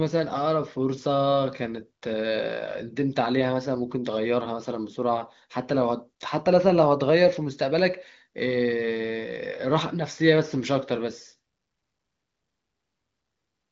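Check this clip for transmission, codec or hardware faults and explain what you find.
The speech arrives over an AMR wideband (HD Voice) link at 23.05 kbit/s, with its content stopping near 7.3 kHz as that wideband design dictates, and nothing in the signal registers as a fault.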